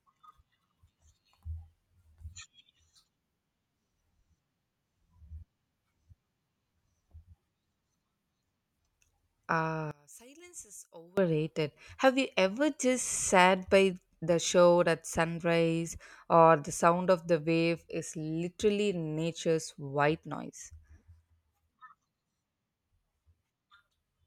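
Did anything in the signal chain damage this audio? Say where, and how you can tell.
Yes. One channel inverted, from 9.91 to 11.17 s: the speech suddenly drops by about 24 dB and turns faint when heard in mono. With one stereo channel's polarity flipped, the centred voice cancels on summing and only the small left-right difference survives. The likely cause is a reversed conductor in the analogue wiring.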